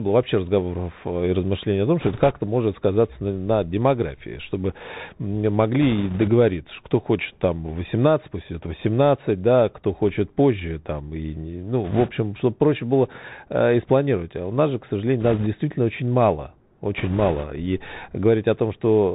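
The whole recording passes through a Bluetooth CVSD headset codec. The sound fits a 64 kbps one-bit stream. Each sample only steps up or down, and the step size adapts. Nothing above 4 kHz survives, so the speech is plainly narrowband. Loud high sounds outrun the step and distort. Sibilants turn scratchy. A granular hiss sits under everything.

Bursts of bit errors on the Bluetooth voice link come in five places. The first is at 2.00–2.31 s. The second is at 5.82–6.30 s, just before "кто хочет там". The third is at 11.84–12.11 s, between "позже там и ну" and "чтобы проще было э". The fourth is at 15.20–15.47 s, between "у нас же к" and "очень мало". The last is at 16.98–17.45 s. The error rate sounds like a few percent. Since each flipped bit carries little weight, there are no loud clicks. Instead, a rushing, crackly noise rides on the speech.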